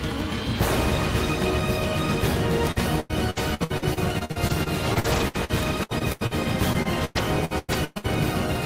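Packets went missing or arrived too late again and again, first from 2.71 to 6.33 s and again from 6.73 to 8.06 s. This is repeated packet loss, and each hole was patched by stretching the sound just before it. The first run has many short gaps, the longest 93 ms, with about a quarter of the stretch concealed. The second has fewer but longer gaps, up to 112 ms, covering about a third. Both sound choppy, with pieces missing.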